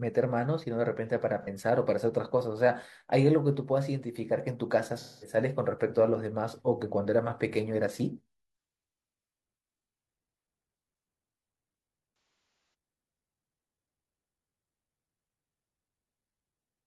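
AAC frame loss with concealment occurs three times. At 1.43 to 1.47 s, about 43 ms of audio is missing, consistent with a single AAC frame, and the decoder patches the gap from the last good spectrum, leaving a brief smeared, phasey blur. From 4.98 to 5.36 s, roughly 213 ms is rebuilt the same way, so the sound turns noisy and washed out. Between 12.14 and 12.74 s, 427 ms is lost in scattered bursts. The longest run, around 300 ms, fades toward silence before the sound returns.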